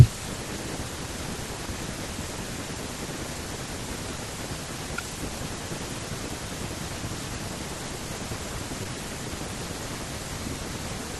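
At 8.83 to 8.87 s, short concealed packet loss: about 20 ms of speech never arrived in time, and the decoder filled roughly 13 ms by extending the preceding sound before blending back. It heard as a brief smear; a spectrogram shows the preceding sound stretched, then a seam.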